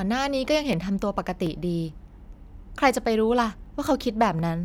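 From 0.73 s to 4.39 s, a click recurs in the speech about every 0.73 s, about seven in all. These are clock drift buffer slips, likely from two devices running on unmatched clocks, out by roughly a thousand parts per million, so the buffer periodically drops or repeats a small block of around thirty samples.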